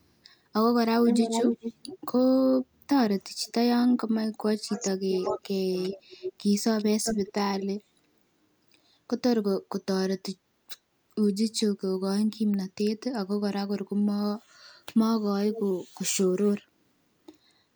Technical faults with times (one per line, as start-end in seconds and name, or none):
1.07-1.97 echo leak
3.46-3.52 echo leak
4.42-5.94 speech suppressed in double talk
5.25-5.39 echo leak
5.83-6.32 echo leak
6.78-7.65 echo leak
15.53-15.61 echo leak